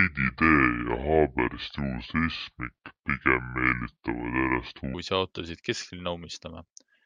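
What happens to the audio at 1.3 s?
At 1.3 s you're inside a section at the wrong speed, 0.0 to 4.94 s, running at 0.68x, likely off the wrong clock, so speech drags about seven semitones low.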